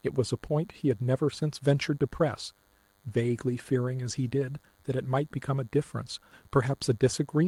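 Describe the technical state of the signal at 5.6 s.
A nearby DECT cordless phone or base station is firing a radio burst every 10 ms, and the audio circuitry rectifies it. At 5.6 s, as throughout the clip, this DECT cordless phone buzz sits as a thin, steady 100 Hz buzz rich in harmonics, around 40 dB below the speech.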